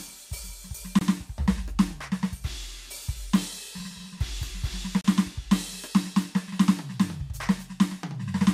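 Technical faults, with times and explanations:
0.99–1.01 s and 5.01–5.04 s: gap at a join of encoded pieces. The music drops out for about 24 ms, then 32 ms, and resumes exactly where it left off. The piece boundaries fall every 4 s. Each separately encoded piece kept its encoder start delay and padded final frame, so silence sits at each seam. Unlike random dropouts, the gaps land on a fixed 4 s grid, and their edges are softened by the codec.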